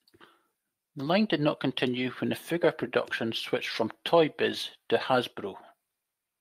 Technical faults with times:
none

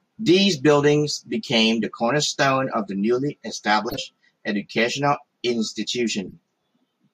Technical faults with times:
1.17-1.21 corrupt frame decoded
3.89-3.98 corrupt frame decoded
4.95-4.97 corrupt frame decoded
6.28-6.33 corrupt frame decoded

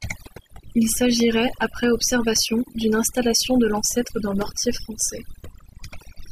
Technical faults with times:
0.00-6.31 overdone noise removal
1.20-1.22 loud pop

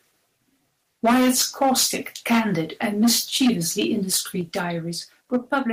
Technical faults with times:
1.04-1.96 microphone overload
1.06 microphone volume stepped down
2.26-3.85 microphone overload
4.41 microphone volume stepped down
5.33-5.59 microphone overload
5.36 microphone volume stepped down

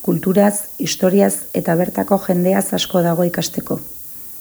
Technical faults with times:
0.00-4.41 low bit depth with noise shaping

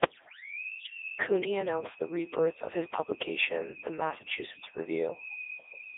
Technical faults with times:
0.00-5.97 Codec 2 vocoder

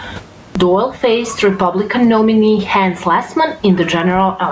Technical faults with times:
0.00-4.51 gain pumping
0.47-0.55 clipped start after a pause

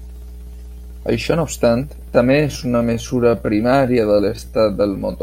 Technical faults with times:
0.00-5.22 mains hum
2.23-5.22 time-stretched section

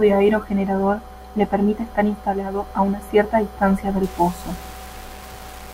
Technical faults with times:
4.03-5.74 low bit depth without dither

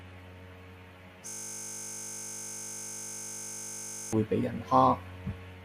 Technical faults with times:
1.27-4.13 system hang loop

